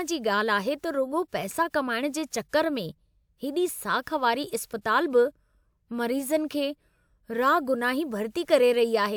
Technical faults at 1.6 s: none

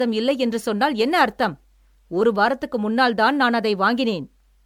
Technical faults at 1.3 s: generation loss

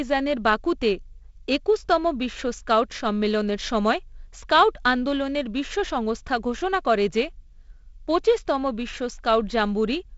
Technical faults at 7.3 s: none

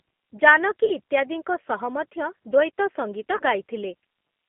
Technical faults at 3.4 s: G.729 codec; VoIP packet loss concealed by the speech codec

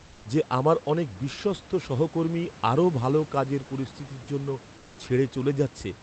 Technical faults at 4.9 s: comfort noise in place of the background

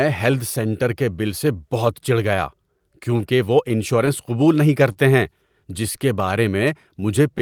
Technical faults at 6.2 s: clock drift between sender and receiver; scattered short gaps

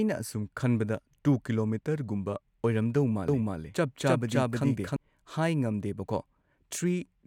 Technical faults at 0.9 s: none

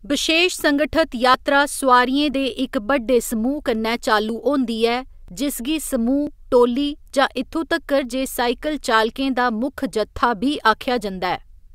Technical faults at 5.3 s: overlap between stream segments

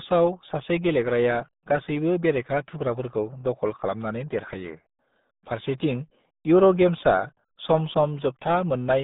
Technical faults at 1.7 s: RealAudio 14.4 codec

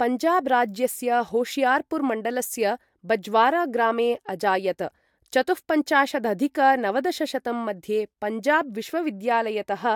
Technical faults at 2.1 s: none

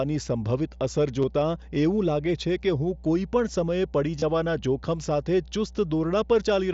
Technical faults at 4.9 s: mains hum

